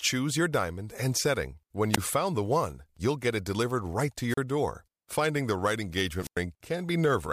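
Three wireless microphone squelch dropouts hit this speech, where the radio link fades and the receiver's squelch mutes everything: a brief hiss rise then a 16 ms hole at 1.92 s, a 36 ms gap after "it delivered right to" at 4.29 s, and a 99 ms one after "the right" at 6.21 s.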